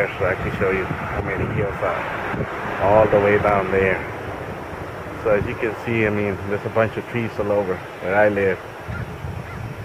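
No technical faults can be heard anywhere in the clip. There is nothing in the audio that needs a timestamp or an explanation.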